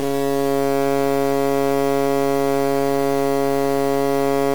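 Low bit depth without dither runs throughout the music. A coarse, grainy distortion tracks the sound at roughly 15 dB below it, and quiet moments turn gritty or sputter. The likely cause is truncation to 4 bits with no dither.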